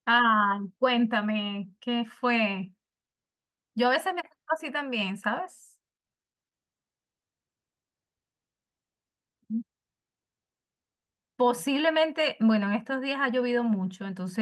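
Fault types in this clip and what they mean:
No technical faults can be heard in this speech clip. There is nothing in the audio to list under any fault type.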